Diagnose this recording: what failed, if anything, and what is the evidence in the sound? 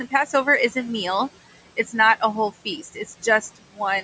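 The call processing stage is where things go wrong, specifically with noise suppressor artifacts throughout. The suppressor pulls the room noise down by about 17 dB frame by frame, so the background sinks in pauses and creeps back under the talking.

There's also speech cut by the noise suppressor between 2.83 and 3.24 s, just after "not a whole". The suppressor mistook quieter bits of speech for noise and ducked them by up to about 13 dB, so roughly a tenth of a second sounds swallowed.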